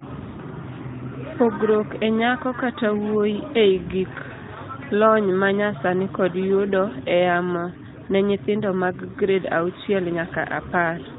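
No technical faults can be heard in this speech recording.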